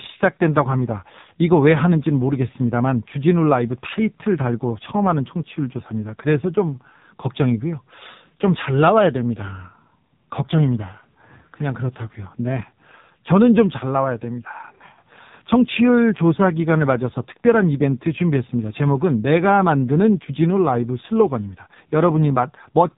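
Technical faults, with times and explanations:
Throughout, AMR narrowband mobile codec: the speech stops dead at 3.8 kHz and carries a heavy buzzy, synthetic edge, suggesting a very low mode near 5.9 kbps. The synthetic buzz, not just the missing top, separates it from simple low-pass filtering.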